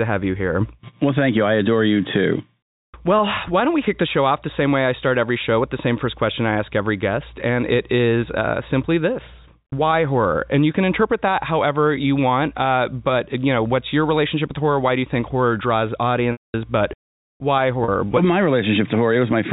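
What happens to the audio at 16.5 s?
Right after "you think horror draws", the voice briefly hangs on a buzzy, held tone that then fades into silence before speech resumes with a short cross-fade. This is packet loss with pitch repetition, from 16.32 to 16.54 s, a 220 ms gap. The receiver filled the missing audio by repeating the last pitch period and fading it out, which fits roughly eleven 20 ms packets dropped from the G.711 telephone stream.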